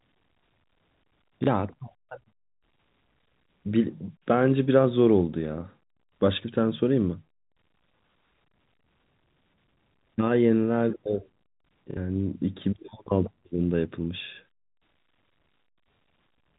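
A small blip at 1.44 s (30 ms) and a brief robotic stutter at 11.91 s (60 ms): packet loss with last packet repeated, replaying stale audio across the gaps.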